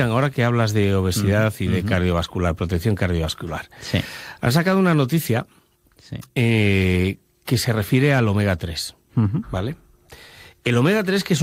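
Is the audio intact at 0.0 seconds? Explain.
Yes, the audio is intact at 0.0 seconds, with no fault present at that moment.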